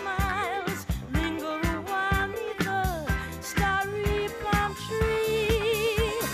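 No technical faults can be heard anywhere in the recording, and the signal stays steady and intact from the first moment to the last.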